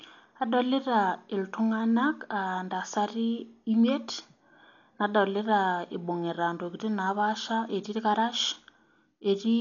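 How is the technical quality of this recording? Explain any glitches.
Heavy codec damage runs through the whole speech recording, likely from Dolby Digital compression. Nothing above 7 kHz, so it sounds dull. The coder seems to have starved many frequency lines of bits and filled them with noise, leaving rough, fluttering hiss around voiced tones. That fits a very low bitrate, around 48 kbps.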